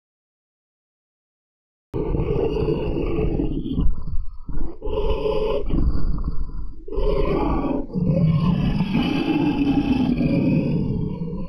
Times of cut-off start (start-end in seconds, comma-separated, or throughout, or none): 0.00-1.94